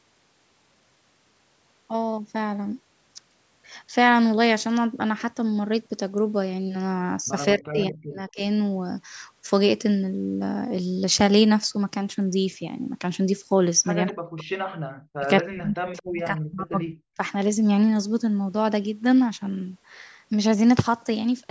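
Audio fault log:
7.56–8.42 s, 14.11–15.27 s and 15.43–17.2 s: speech suppressed in double talk. The speech sinks by up to about 40 dB across most of each span, likely because an echo canceller could not separate this side's talk from the overlapping far-end echo and attenuated both.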